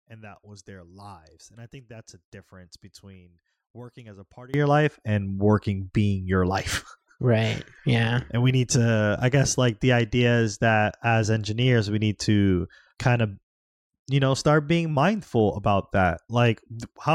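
One channel inverted from 0.0 to 4.54 s of this speech clip: summed to mono, the centred speech drops by about 22 dB to a faint residue, likely because one stereo channel has reversed polarity and cancels the shared signal, until full level returns at "your life and working".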